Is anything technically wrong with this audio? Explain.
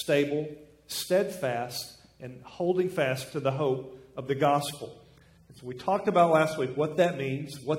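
Yes. From 4.22 s to the end, the adaptive stream drops to a lower bitrate. The player appears to have switched mid-stream to a cheaper rendition of the same AAC encoding, at roughly a quarter of the data rate, which fits a step from around 96 kbit/s to under 30 kbit/s. The change is abrupt but seamless: smearing and warbling codec artefacts rise sharply, with no gap at the switch.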